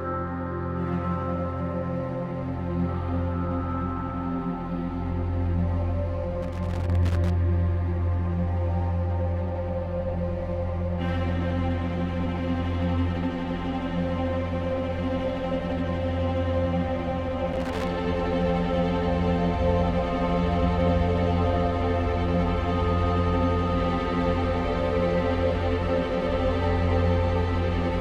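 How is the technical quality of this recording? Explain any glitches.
The recording has two bursts of loose connector crackle, from 6.43 to 7.30 s and from 17.53 to 17.88 s. A worn or dirty contact was intermittently making and breaking, chopping the signal, so it sounds like irregular scratching. The waveform shows jagged dropouts and spikes, and the spectrogram shows broadband vertical streaks.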